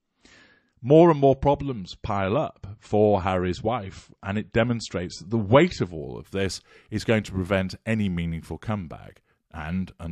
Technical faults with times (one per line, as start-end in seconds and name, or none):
0.00-6.00 adaptive stream starting at a low bitrate